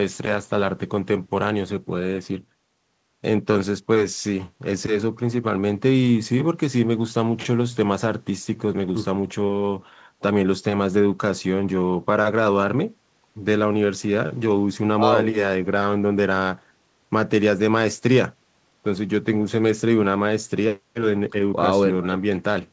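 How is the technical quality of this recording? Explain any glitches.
Nothing glitchy turns up anywhere in this speech, and the call path shows in the top end, which stops at 8 kHz, as fits a wideband call codec such as G.722.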